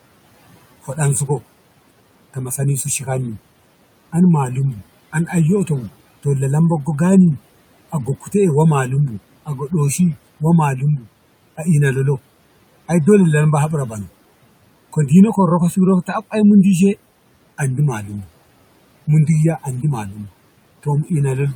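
From 7.92 to 8.34 s, the noise suppressor cuts speech it mistook for noise, dipping it by about 10 dB; roughly 150 ms sounds swallowed.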